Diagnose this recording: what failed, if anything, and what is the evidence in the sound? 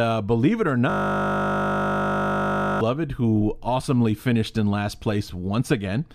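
A system hang loop at the driver or buffer stage: from 0.90 to 2.81 s the speech is replaced by one 20 ms buffer repeating, a steady 50 Hz buzz.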